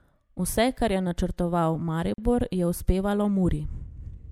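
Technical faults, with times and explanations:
2.14–2.18 s, gap at a join of encoded pieces: a 42 ms silence breaks the speech, its edges smeared, left by untrimmed encoder start delay and final-frame padding.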